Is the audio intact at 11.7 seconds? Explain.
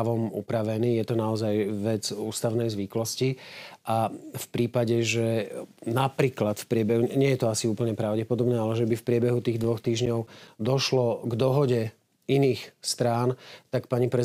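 Yes, at 11.7 seconds the audio is intact, with no fault present at that moment.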